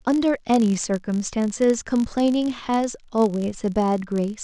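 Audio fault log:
Throughout: filter restarted on every block. Each block begins from zero filter state, so every boundary carries a small transient, heard as a 50 Hz buzz that swells and fades with the speech level. The waveform shows ticks every 20 ms, and a spectrogram shows faint vertical stripes and harmonics spaced 50 Hz apart.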